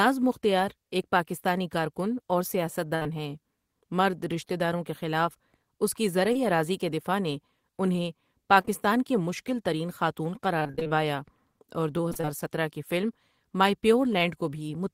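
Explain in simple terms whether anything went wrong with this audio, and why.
A burst of packet loss hits at 2.95 to 3.03 s. About 60 ms of the speech never arrived in time, so the receiver stretched the last sound into a fading buzz or hiss before the speech picked up again further on, with that piece missing.

Short concealed packet loss follows immediately, at 3.03 to 3.07 s, and occurs again at 6.33 s and twice in a row at 8.61 to 8.69 s. Each time roughly 20 ms went missing and was patched by continuing the previous sound, leaving a brief smear or wobble where a quick sound can drop out.

Repeated packet loss (robotic sound) occurs at 10.59 to 10.91 s and again at 12.09 to 12.29 s. Small pieces of up to 24 ms kept going missing in quick succession, and about half of each stretch is filled-in sound rather than real speech. That makes these stretches choppy, with pieces missing.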